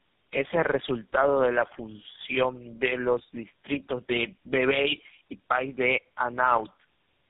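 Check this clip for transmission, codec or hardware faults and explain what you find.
One fault runs through the whole clip: tandem speech coding, with the speech passing through three low-rate speech codecs in sequence.

From start to finish the speech was decoded and re-encoded at each network boundary, so every coder worked on the previous one's artefacts. The result sounds rough, muffled and warbly. On a spectrogram nothing appears above 3.8 kHz, and the harmonics look smeared and blotchy. The sound fits a chain ending in GSM full rate.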